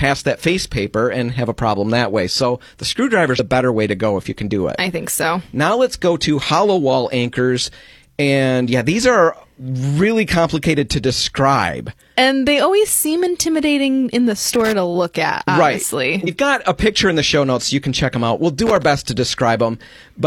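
Compressed frames skipped at 3.31 to 3.39 s and again at 16.24 to 16.29 s in this speech clip: whole coded frames are missing or rejected by the decoder, so the audio leaps ahead by about a tenth of a second. Loose connector crackle at 14.54 to 14.72 s and 18.67 to 18.85 s: a worn or dirty contact rapidly makes and breaks, chopping the signal into an irregular scratchy burst of crackle.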